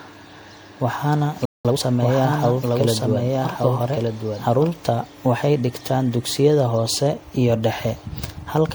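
Right from the start the speech has that swirly, hollow, smeared quality, with consonant attacks going soft. That's generation loss, most likely from being run through MP3 at 96 kbit/s a few times over, each pass stacking fresh quantisation noise and spectral holes.

At 1.17 s a doubled audio track cuts in abruptly: a second full-band copy, about 5 dB down, trailing roughly a second behind, dry with no room tail. It likely comes from a slower second capture path or an out-of-step edit, and it snaps off at 4.71 s.

Inside that stretch, at 1.45 s, everything drops out for about 192 ms. That's a playback stall, the player having likely starved for data or had its thread blocked, and it picks up where it stopped.

From 1.65 s to 1.83 s there's time-compressed catch-up. The player chops and cross-fades small slices to clear its backlog, so the speech rushes at 2x speed at normal pitch.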